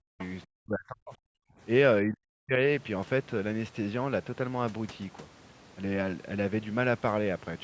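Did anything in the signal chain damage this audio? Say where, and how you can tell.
Yes. The damage sits in the call processing stage, most likely the echo canceller mishandling double talk. When both ends spoke at once, it could not tell the local talker from loudspeaker echo and attenuated everything. The result is speech suppressed in double talk: the voice sinks by as much as roughly 40 dB, nearly cutting out, from 0.00 to 0.21 s, from 0.47 to 1.51 s, and from 2.05 to 2.53 s.

The same echo canceller also left residue. Between 0.19 and 0.28 s, the other side's voice leaks through as a brief, faint scrap about 20 dB below the talker. The likely cause is incomplete removal of the far end's voice, which the talker's loudspeaker played back into the microphone. The cut above 8 kHz from the call's microphone processing is normal band-limiting and not part of either fault.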